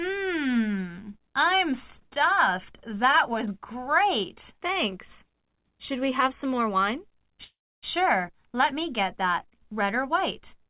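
A call audio freeze runs from 7.44 to 7.85 s: the last sound stretches into a fading buzz, then about 290 ms of silence, before the audio resumes where it stopped, nothing lost, just 385 ms later. Packets were likely delayed, draining the jitter buffer. The band stops at 4 kHz, fitting G.711 A-law.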